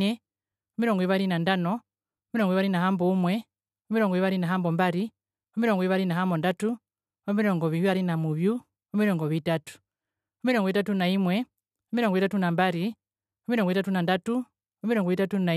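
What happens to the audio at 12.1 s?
Nothing goes wrong at 12.1 s; the speech carries on cleanly through that point with no dropout, click or distortion.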